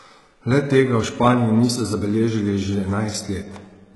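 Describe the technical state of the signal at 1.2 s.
At 1.2 s the speech carries heavy HE-AAC compression damage throughout: the treble is likely rebuilt by band replication, so s sounds turn gritty and metallic, fitting roughly 12 kbps. A spectrogram shows nothing above 11.5 kHz.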